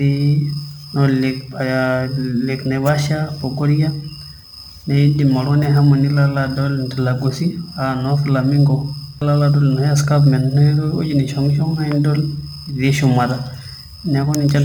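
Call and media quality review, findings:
Crude rate conversion throughout: nearest-sample repeating, fits a 44.1 to 48 kHz step, no filter. Inharmonic gritty fizz trailing loud, bright speech, roughly 30 dB under.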